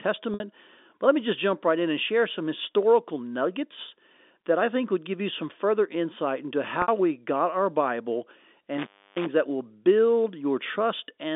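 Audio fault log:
0.34 s and 6.82 s: packet loss with pitch repetition. Each gap lasts 60 ms, which fits three 20 ms packets. The receiver fills the hole by looping the last pitch period, so the sound briefly holds on a buzzy, static tone that fades over roughly 50 ms, then cross-fades back into the speech. On a spectrogram, evenly spaced harmonic lines run flat and fade. In the waveform, identical repeating cycles shrink in amplitude.
8.75–9.28 s: intermittent contact. A loose connection opens for about 0.3 s inside this span. The sound drops out abruptly with crackle at the break and at the reconnection, and only faint hiss remains while the line is open. The waveform shows a near-flat stretch bracketed by sharp spikes. On a spectrogram, thin vertical broadband streaks mark the edges, with a pale, low-level noise floor between them and no harmonics, within the 250 Hz to 3.6 kHz telephone band of the G.711 line.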